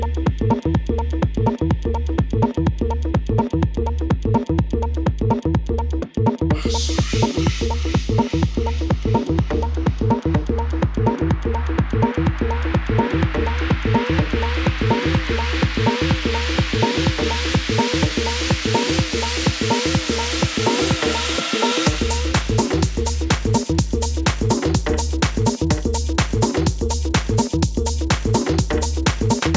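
No technical fault can be heard in this audio. It carries the sound of a call's microphone processing, with the lowest bass trimmed away and nothing above 8 kHz.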